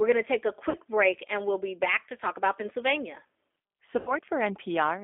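G.729 codec damage runs throughout. Each 10 ms frame is rebuilt from a vocal tract filter, a pitch predictor and a few pulses at 8 kbit/s, on a line band of 250 Hz to 3.6 kHz. The speech sounds plainly rough, synthetic and thin, with no bass or upper treble.

VoIP packet loss concealed by the speech codec occurs at 0.70–0.75 s, between "going to take a" and "break and we'll be", and again at 3.99–4.15 s. The decoder filled the missing audio, about 40 ms and then about 80 ms (consistent with two and four 20 ms packets), by extending its last pitch and filter at falling gain. Each gap becomes a brief buzzy or noisy, fading smear, longer in the second instance, and the voice stays weak for a moment after.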